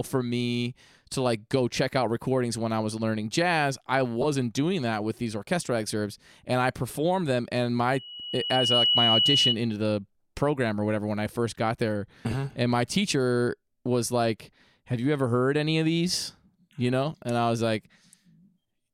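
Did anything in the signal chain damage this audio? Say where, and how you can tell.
Yes. Frames out of order, at the network or jitter-buffer stage: 4.21–4.25 s and 12.29–12.34 s, where short stretches play with halves swapped, heard as a garbled flutter. This fits misordered 10 ms and 20 ms blocks of frames.

A loudspeaker feedback squeal from an acoustic loop between microphone and loudspeaker runs from 7.92 to 9.57 s. A single 2.9 kHz tone swells over roughly a second to about 5 dB above the signal. The spectrogram shows one bright horizontal line brightening steadily, and the waveform's envelope grows.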